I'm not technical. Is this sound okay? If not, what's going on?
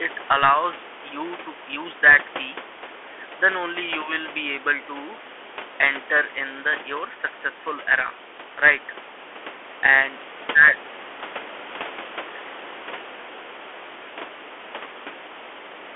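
No. From start to finish the speech sounds thin and boxed-in, like a phone call. S sounds come out scratchy, louder high sounds break up, and a gritty hiss sits under the voice. This is the Bluetooth CVSD headset codec, the basic format headsets use for calls. It squeezes sound into a narrow band, so nothing above about 3.8 kHz gets through, and its rough one-bit encoding adds the grit. The quieter room background beneath is simply part of the recording.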